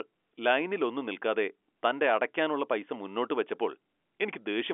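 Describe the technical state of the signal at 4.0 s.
At 4.0 s the audio is intact, with only the narrow band of G.711 telephone coding, which leaves nothing above about 3.7 kHz.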